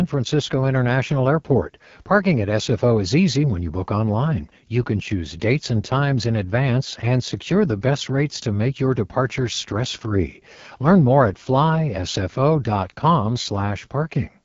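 AMR wideband (HD Voice) codec damage runs throughout: speech sounds rough and raspy, with nothing above 7.4 kHz, which fits AMR-WB at one of its lowest rates, around 8.85 kbit/s.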